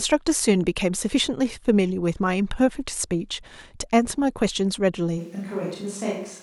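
From 5.20 s to the end, speech turns abruptly roomy and thin, somewhat quieter and noisier: likely a switch to a distant microphone.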